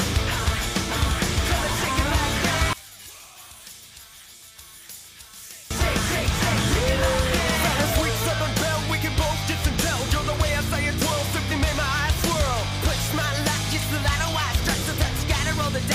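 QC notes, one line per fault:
2.73–5.71 s, one channel inverted: the sound suddenly drops by about 20 dB, with nearly everything gone and only a faint residue left before it snaps back to full body. The likely cause is one side of the stereo pair flipping polarity, so everything shared by both channels cancels when they're folded to mono and only the small left-right differences survive.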